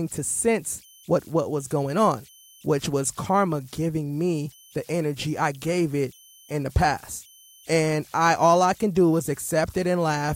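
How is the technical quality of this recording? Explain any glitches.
The recording is compromised by converter idle tones running through the whole clip. An undithered delta-sigma converter settles into repeating bit patterns on low-level input, generating faint tones around 3 kHz, about 31 dB below the speech, heard in pauses and as grainy noise under quiet passages.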